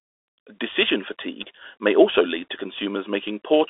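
Throughout, the speech carries Bluetooth CVSD headset codec damage: a 300 Hz to 3.7 kHz band, nothing above 3.8 kHz, scratchy sibilants and granular hiss, consistent with 64 kbps one-bit delta coding.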